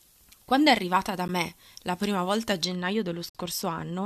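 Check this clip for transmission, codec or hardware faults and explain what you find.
Two kinds of fault are present: uncorrected pre-emphasis over the first part of this speech clip, and two silent gaps where stream segments join.

From 0.0 to 2.65 s, pre-emphasis was left on. The treble was lifted before transmission and the matching de-emphasis was never applied, so the highs sit about 13 dB above the 1 kHz level at 10 kHz. This fits a 75 µs FM curve. The speech sounds thin, bright and hissy on sibilants. A general treble boost would have a different shape. This one rises steadily from the low kHz region as a shelf, and it stops abruptly at 2.65 s rather than running through the whole clip.

At 1.28 s, and again from 3.30 to 3.35 s, there is a gap between stream segments. The time stamps of adjacent segments do not quite meet, and the player fills the missing span with digital silence, about 11 ms at the first point and 52 ms at the second. 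The two holes fall roughly 2 s apart, which fits 2-second segments. Each sounds like a hard-edged cut to silence. Unlike a packet-loss dropout, no audio is missing or smeared by concealment. The sound simply resumes where it left off, slightly delayed.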